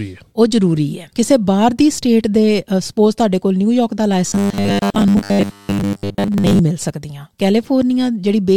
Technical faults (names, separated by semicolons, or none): robotic sound from repeated short buffers